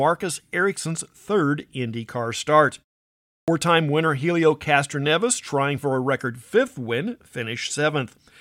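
At 3.4 s, after a 0.64 s pause, there's a clipped start after a pause: the output device was still waking up, so about 78 ms of speech onset gets swallowed and it starts abruptly.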